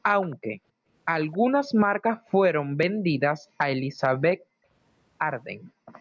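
From 0.00 to 0.87 s the room background is gated by the echo canceller. While the far-end loudspeaker is active the canceller suppresses the microphone path, and the ambience falls by about 40 dB for roughly half a second in total before recovering. Within that span, from 0.22 to 0.36 s, a faint delayed copy of the speech appears at around 25 dB below the direct signal, trailing it by 271 ms. A second, weaker fragment, roughly 35 dB down and 272 ms late, surfaces from 1.33 to 1.38 s. Both are likely echo leak, where loudspeaker sound picked up by a microphone was not fully cancelled and was sent back down the line. The steady delay of about 0.27 s is consistent with a single acoustic path.

Gating recurs four more times. At 1.90 to 2.00 s the background dips by about 18 dB for under a tenth of a second. From 2.58 to 3.58 s it drops by about 40 dB for roughly 0.7 s in total. From 4.37 to 4.69 s the drop is again about 40 dB, lasting about 0.3 s. 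From 5.54 to 5.93 s it is about 40 dB for roughly 0.4 s. Each time the room tone dips and returns when the canceller releases. Throughout, the call microphone processing band-limits the signal, with nothing present above 8 kHz.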